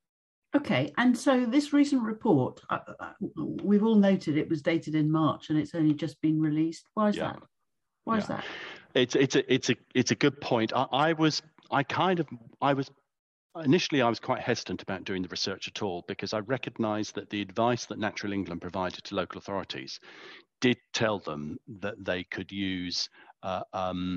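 Nothing is technically wrong with this audio, so there are no fault times or causes to give.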